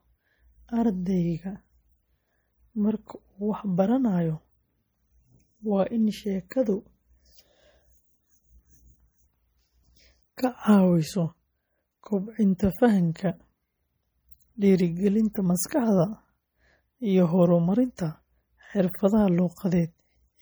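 Throughout the clip, heavy perceptual coding has starved the encoder of bits, likely MP3 compression at a rate that fits about 48 kbps. Weak frequency lines flicker in and out, so the speech sounds watery and swirly, with metallic chirps on s sounds and smeared attacks.

At 14.31 s and again from 15.33 to 15.35 s, pre-echo appears. Quantisation noise meant for a loud attack was spread across the whole transform block, filling the quiet moment before it. A hiss of 14 ms and then 20 ms leads each attack, which sounds softened.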